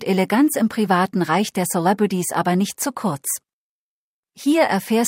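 No technical faults can be heard in this speech recording, so there are none to describe in time order.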